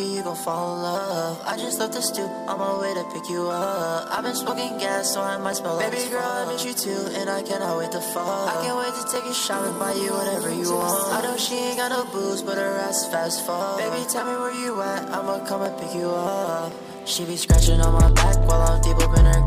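Six sharp single clicks at 5.53, 9.16, 10.82, 15.66, 16.72 and 18.08 s are likely dropped samples, where under a millisecond vanishes and the waveform jumps, with no audible gap, unlike a dropout.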